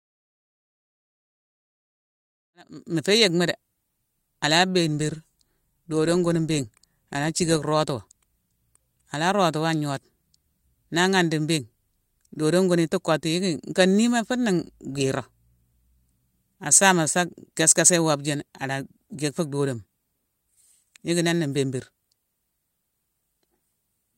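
No faults found in this speech clip; the level rises from about 2.5 s to full at 3.1 s as an ordinary editor's fade-in.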